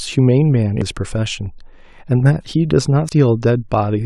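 Damaged data in a compressed stream shows up at 0.82 s and again at 3.09 s in this speech. Each is a brief blip where corrupted frames trip the decoder, which loses sync and hunts for the next valid frame header before the sound resumes.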